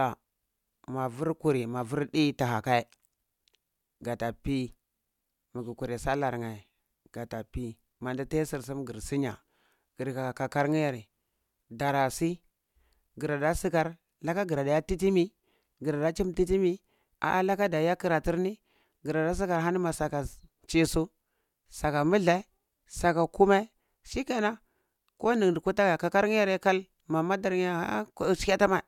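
Speech recording with no technical faults to report.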